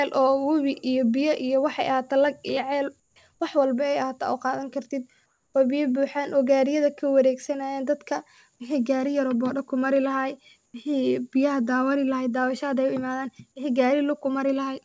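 At 3.00–3.16 s, 5.26–5.54 s and 10.66–10.74 s, the faint background turns into flat, featureless hiss, about 5, 4 and 0 dB quieter. This is likely comfort noise in place of the background, so the spectrogram shows smooth, textureless patches below the 8 kHz cut-off.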